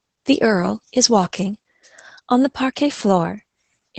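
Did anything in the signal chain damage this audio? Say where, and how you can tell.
Yes, at the codec stage. Throughout, the speech sounds muffled, hoarse and a little robotic, with nothing above about 8 kHz. This points to Opus voice compression in SILK mode at a low bitrate, near 12 kbps, which codes the excitation coarsely within a wideband channel.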